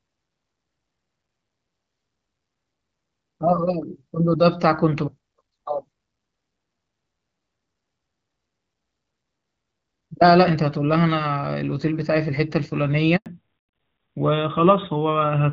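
A speech recording carried over a mobile call, coded as HD Voice with light damage consistent with AMR wideband at about 12.65 kbit/s. At 13.16 s a handover gap cuts the audio to silence for 100 ms, while the call switches networks and no frames arrive. From 13.26 s to the end, a fallback to narrowband removes everything above 4 kHz. The voice turns duller and rougher, which fits AMR narrowband at 12.2 kbit/s.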